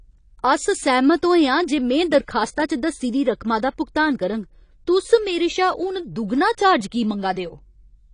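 AAC compression, throughout: the speech sounds dull and smeared with nothing above 10.1 kHz, likely AAC-LC discarding detail at what sounds like about 32 kbps.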